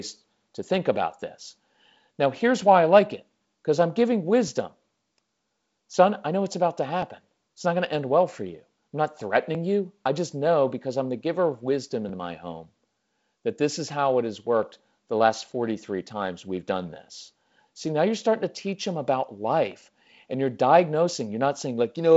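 Regular clicks recur every 2.54 s from 1.94 s to 19.72 s, likely clock drift buffer slips. Each one drops or repeats a short sample block, showing as a thin vertical spectrogram line and a small waveform step.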